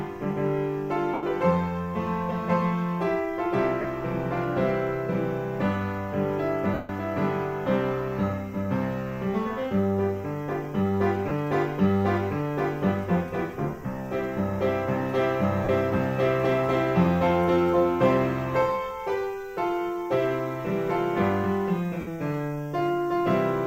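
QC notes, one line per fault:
1.14–1.23 s, 3.81–3.85 s, 6.74–6.89 s, 11.28–11.31 s, 15.64–15.69 s, 22.00–22.08 s: lost LE Audio frames. Gaps last 22.5 to 150 ms. Each one fits whole 7.5 ms frames going missing. The LC3 decoder fills the hole by replaying the last spectrum with random signs. Steady tones blur into a noisy smear. After a few frames the fill fades. So the longest gaps, at 6.74 s and 1.14 s, sink toward silence before the sound returns.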